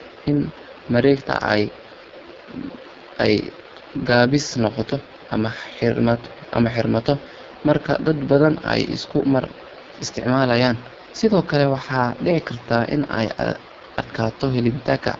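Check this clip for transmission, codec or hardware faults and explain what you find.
One codec fault runs through the whole clip: AMR wideband (HD Voice) coding at its lowest mode. The speech model is starved of bits, which fits a 6.6 kbit/s rate, so voices turn rough and raspy, with nothing above 7.6 kHz.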